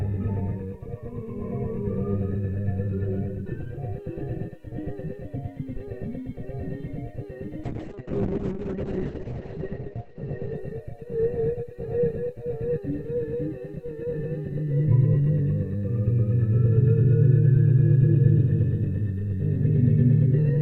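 A recording of everyday sounds with two faults. At 5.76 s a deep phantom power thump lands and is gone by 5.84 s, decaying in about 17 ms. Switching a supply on a live input sent a voltage step through the coupling capacitors. From 7.64 s to 13.61 s a call bitrate drop makes the sound rough and muffled. The top end falls from 20 kHz to 8 kHz. The worst stretch lasts 1.4 s. This fits the encoder falling from around 64 kbps to about 6 kbps.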